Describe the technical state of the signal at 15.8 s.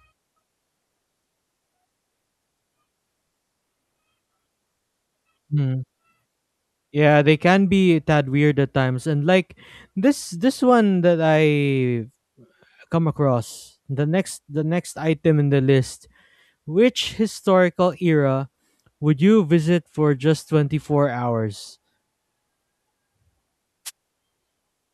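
At 15.8 s the signal is intact, with no audible technical fault at that point.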